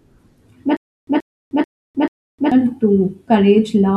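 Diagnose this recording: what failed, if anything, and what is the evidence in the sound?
A stutter with silent gaps runs from 0.77 s to 2.52 s in this speech. The same 130 ms burst of sound plays four times, each followed by about 308 ms of dead digital silence, repeating every 437 ms. The likely cause is a stalled player or stream buffer that replays its last fragment on each retry and then runs dry. Unlike packet-loss concealment, nothing fills the gaps, and the audio that should have played there is gone.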